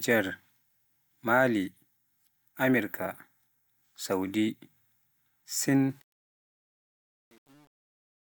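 From 5.90 s the fade-out picks up truncation distortion, gritty from 6.15 s to the end, which fits an 8-bit stage without dither.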